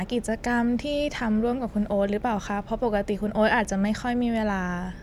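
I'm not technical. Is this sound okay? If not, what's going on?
Yes, this sound is okay, and nothing is going wrong with it.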